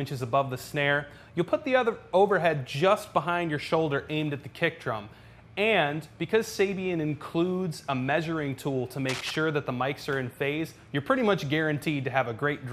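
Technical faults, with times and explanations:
9.09 to 9.36 s, cable scratch noise: for roughly a quarter of a second, a dense, irregular scratching and rustling sits over the sound at about 10 dB below the signal level. The likely cause is a worn cable, connector or control being moved, so its contact resistance jumps about rapidly and injects uneven bursts of noise into the path until the contact settles again.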